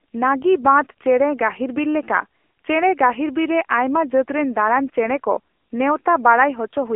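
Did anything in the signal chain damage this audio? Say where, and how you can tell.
Yes. The damage sits at the codec stage: the speech has been through AMR narrowband mobile coding for its whole length. Nothing reaches above about 3.6 kHz, and the audible band sits roughly between 300 Hz and 3.4 kHz, as on a phone line. The voice is rebuilt from a vocal-tract model excited by sparse pulses every few milliseconds, so it sounds plainly buzzy and synthetic, which fits a mid-rate AMR-NB mode near 7.95 kbps.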